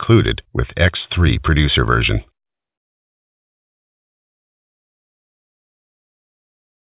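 No technical faults can be heard anywhere in the clip. Nothing in it calls for a timestamp or a fix.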